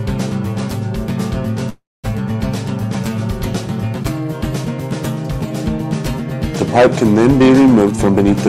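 From 1.69 to 2.06 s there is a call audio freeze: packets were likely delayed in transit and the jitter buffer emptied. The last sound is stretched into a fading buzz or hiss, then about 220 ms of silence, before the audio resumes where it stopped, with nothing lost and 342 ms of added delay.

From 7.82 to 8.31 s comes a jitter buffer speed-up: the buffer held more audio than its target, so the receiver cut repeated pitch-period-sized slices, around 150 ms in total. The sound plays at 133% speed with unchanged pitch and comes across as hurried.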